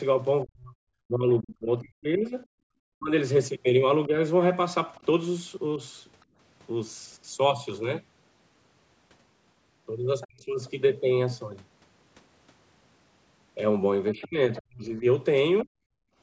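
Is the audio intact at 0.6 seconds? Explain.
No, from 0.43 to 4.13 s the speech dips and cuts out in pieces, sometimes by about 40 dB, likely speech suppressed in double talk as the echo canceller ducked both the voice and the loudspeaker echo.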